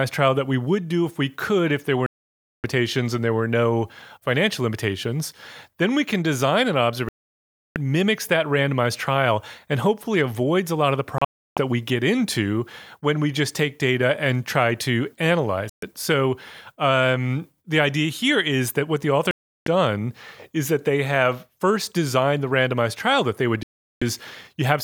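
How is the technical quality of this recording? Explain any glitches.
The speech is hit by six digital broadcast dropouts. Each time the receiver stopped getting valid frames, either losing the signal or rejecting frames that failed their checksum, it muted until clean frames resumed, so everything sent in that gap is gone. The gaps come at 2.06 s (about 0.58 s, after "could if there were", resuming at "and there were no"), 7.09 s (0.67 s), 11.18 s (after "a lot of the", before "that we get into"), 15.70 s (0.13 s), 19.31 s (0.36 s) and 23.63 s (0.38 s, after "trial that they would"). The one at 11.18 s breaks into short holes spread over about 0.38 s, the longest lasting 0.32 s. The gap lengths fit frames of about 32 ms.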